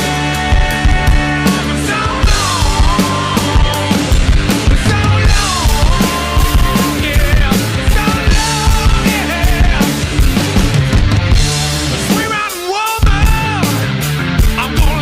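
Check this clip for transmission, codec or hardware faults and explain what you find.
One fault is present, a DC step at 13.22 s. The zero line of the waveform jumps suddenly, by about -10 dBFS. A converter recalibrating or an offset input being switched in would do this. The offset then decays away, which fits a high-pass filter at 20 Hz in the chain. The step is heard as a single low thump or click. The sound itself carries on unchanged through it.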